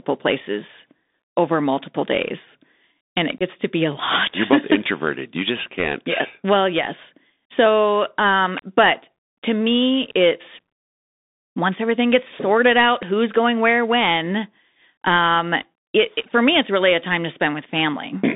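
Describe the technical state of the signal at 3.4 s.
Unconcealed Bluetooth headset packet loss from 3.38 to 3.43 s: 22.5 ms of voice, consistent with a few lost packets, is replaced by silence or an idle pattern. This leaves an abrupt hole and a briefly quieter return. Under it, the Bluetooth CVSD headset codec's one-bit adaptive delta modulation, which fits a 64 kbps link, limits the speech to 200 Hz to 3.7 kHz and adds granular hiss and scratchy sibilants.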